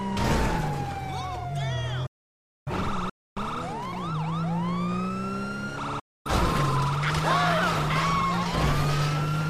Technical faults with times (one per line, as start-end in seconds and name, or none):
2.06-2.72 digital broadcast dropout
3.09-3.37 playback stall
3.37-5.15 time-compressed catch-up
5.99-6.31 digital broadcast dropout